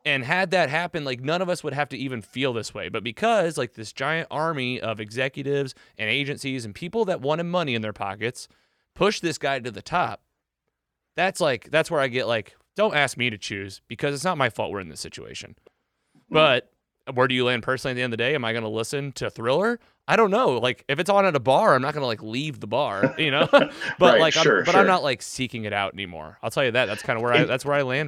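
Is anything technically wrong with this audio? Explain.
Yes. GSM signalling bursts from 27.04 to 28.00 s: a nearby 2G phone's radio bursts, rectified by the audio circuit, give galloping ticks and 217 Hz buzzing around 15 dB below the speech.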